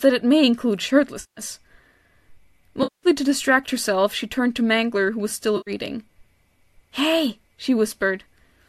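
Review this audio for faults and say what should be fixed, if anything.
Three patches of AAC frame loss with concealment break up the speech: 1.20 to 1.41 s right after "it may include", 2.83 to 3.07 s just before "to distract herself she", and 5.57 to 5.71 s after "who was". Each gap (170, 200 and 100 ms) is filled by the decoder reusing its last good spectrum, so the sound smears into a noisy, phasey wash rather than dropping out. The durations point to runs of 10 ms frames, consistent with a low-delay AAC stream. On a spectrogram each patch shows harmonic lines dissolving into blurred, evenly spread energy; on the waveform the envelope goes flat and fuzzy with no clear pitch periods. The light roughness around the harmonics throughout is likely from the low-delay AAC compression at a rate that fits about 64 kbps. To prevent these dropouts, protect the stream with forward error correction or a larger jitter buffer so lost packets are recovered before decoding.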